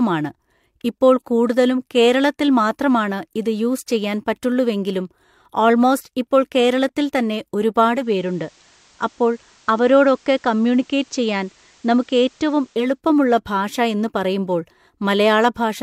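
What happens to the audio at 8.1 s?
At 8.1 s the radio is blending from digital to analogue FM (7.82–13.02 s) over a 456 ms cross-fade: level drops about 1 dB, and faint hiss appears.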